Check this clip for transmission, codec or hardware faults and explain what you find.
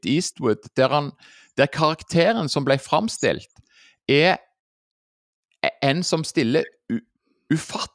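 Nothing stood out on listening to this speech recording.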